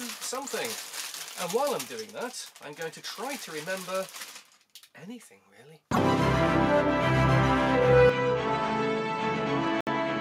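At 8.1 s the sound changes character with no gap. It turns duller and boxy. The level falls by about 5 dB. A new layer of background noise appears, roughly 40 dB below the signal. This is likely an input switched to a poorer device, such as a second microphone or a headset call profile. That device passes a narrower band and adds its own tone and noise. The change lasts to the end.

At 9.81 s the sound cuts out for 63 ms. It resumes at 9.87 s. The dropout is a clean silence, not a fade. This fits a Bluetooth stall. Interference likely delayed packets, so the headphones' buffer emptied. Playback then paused until the resent audio arrived. It happens inside the duller stretch, so it sits on top of the narrowed sound.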